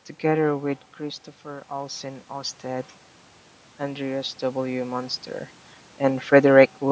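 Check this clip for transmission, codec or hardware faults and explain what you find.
One fault shows up, in the call's level handling. From 0.46 to 2.97 s there is automatic gain rising. The sound at the microphone drops by about 9 dB as the talker moves back around 0.5 s, and the automatic gain control responds by slowly adding about 5 dB of gain over those two and a half seconds. The speech and the room noise behind it swell up together, so the background grows along with the voice and only part of the lost level comes back.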